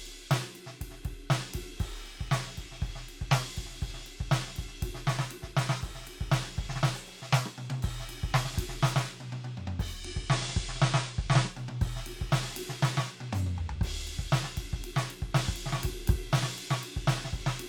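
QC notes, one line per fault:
9.91–11.61 s, digital radio blending to analogue: the receiver lost its digital stream and cross-faded over about 171 ms to the FM broadcast, so the level shifts by about 1 dB, and hiss rises to roughly 35 dB below the music.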